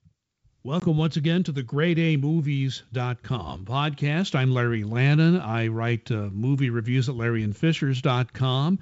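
At 0.80 s the speech drops into a hard-edged silent hole. This is packet loss on an ADPCM call. About 20 ms is missing, which fits a couple of lost packets. The decoder's predictor and step size then disagree with the sender's. Speech returns at "once again to the" briefly distorted, settling by 0.88 s.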